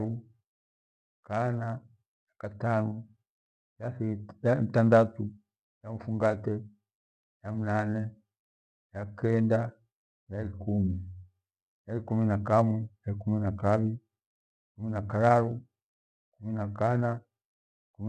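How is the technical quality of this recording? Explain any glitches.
Nothing in this recording stood out as a technical problem on listening.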